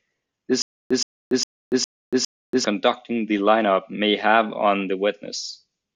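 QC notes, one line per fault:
0.62 to 2.64 s, stutter with silent gaps: the speech stops advancing and a short burst of about 120 ms plays five times, each followed by about 285 ms of dead digital silence, so the fragment returns on an even beat roughly every 0.41 s. The likely cause is a stalled player or stream that replays its last buffered fragment at each retry and then runs dry. The true silence between repeats, rather than a continuous loop, is what sets it apart from a plain repeat glitch, and the speech meant for that stretch never arrives.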